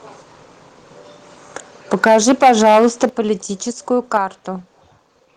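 From 1.93 to 3.06 s the speech shows microphone overload. Peaks go about 8 dB past the converter's limit, likely from an input volume set too high. Around a tenth of the waveform is flattened, adding a harsh crackle to loud syllables rather than a clean change in level. At 2.08 s the microphone volume is stepped down by about 2 dB, and at 3.09 s by about 7 dB, likely the call software reacting to the clipping. Unlike overload, these are sudden, undistorted drops in which voice and background fall together. A brief overload from 4.14 to 4.17 s, about 1 dB over with a small share of samples cut off, is followed at 4.17 s by another step down of about 4 dB.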